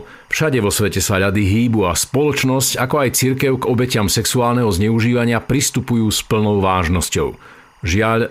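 Timecode bleed runs throughout, beneath the speech. Faint square-wave chirping alternates near 1 and 2 kHz, leaking from an adjacent timecode track, consistent with 23.976 fps code.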